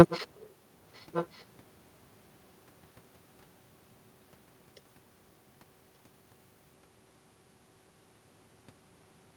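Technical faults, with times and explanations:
0.09–0.20 s and 0.95–1.43 s, echo leak: a faint delayed copy of the speech returns about 1.18 s after the original, roughly 15 to 20 dB below it, likely from a far-end loudspeaker whose echo canceller let residual pickup through and sent it back.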